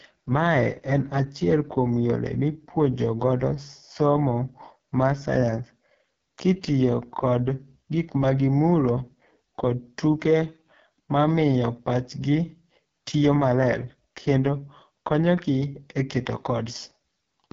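Throughout, the speech sounds rough and raspy, with nothing above 7.3 kHz. This is heavy AMR wideband (HD Voice) codec damage, fitting its lowest 6.6 kbit/s mode.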